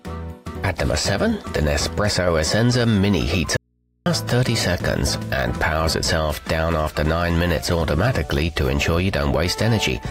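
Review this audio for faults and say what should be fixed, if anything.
From 3.57 to 4.06 s the sound abruptly vanishes for about 0.49 s, leaving only hum about 45 dB down: an audio dropout to a faint residue, likely a broken feed into a still-live input. Secure the connection upstream so the source cannot drop out while the input stays open.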